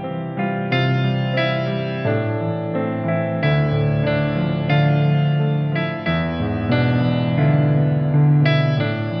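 Nothing in the audio stood out as a technical problem on listening.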